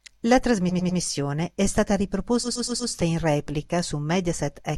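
From 0.69 to 0.99 s, just before "è stata", a 100 ms block plays three extra times. From 2.43 to 2.91 s, after "è stata", a 120 ms block plays four extra times. These are repeated frames. The same compressed data was decoded again, causing an audible stutter. The clip grows by 300 ms and 480 ms.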